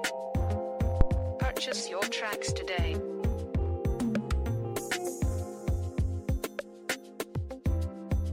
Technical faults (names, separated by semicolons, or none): phantom power thump